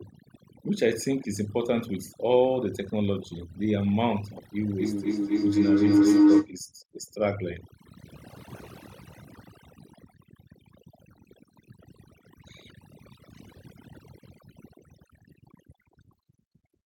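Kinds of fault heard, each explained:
Overdone noise removal: noise reduction set far too hard has pulled down every frequency band near its noise estimate, taking quiet parts of the speech along, so the background drops and breaks up into twinkling specks.
Feedback howl: a microphone-to-loudspeaker loop is gaining level on each pass, so repeats grow rather than decay and narrow onto a favoured band around 300 Hz, building from 4.79 to 6.55 s, about 8 dB above the speech, with repeats roughly every 300 ms.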